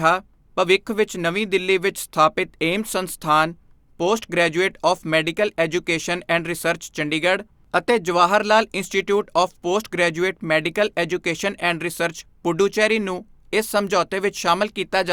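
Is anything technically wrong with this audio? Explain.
No, no technical faults detected.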